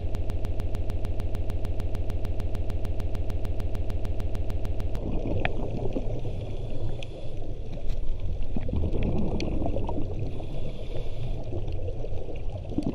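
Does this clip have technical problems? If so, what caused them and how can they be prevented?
Yes: a broken-record loop is already under way at the start and runs until 4.97 s, a 150 ms fragment repeating exactly about 32 times with no decay, unlike an echo, while the underlying audio is lost. The likely cause is a stalled player or stream resending its last buffer. A watchdog that mutes or resyncs when the same buffer repeats would prevent it.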